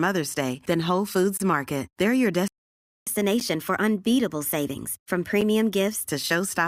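At 1.37 to 1.40 s a gap between stream segments cuts the speech. It is a silent hole of about 26 ms with hard edges. Two segments' time stamps leave a small space, and the player fills it with silence. No audio is lost.

From 2.48 to 3.07 s the speech stops dead in mid-flow. This is a playback stall lasting about 0.59 s. The player likely ran out of data or had its thread blocked. The output stays silent until playback recovers.

Right after the stall, from 3.07 to 6.08 s, comes catch-up at higher speed. The player resamples its backlog at 1.1 times normal speed. The speech sounds hurried and rises by about one and a half semitones. It then drops back to normal pitch and pace.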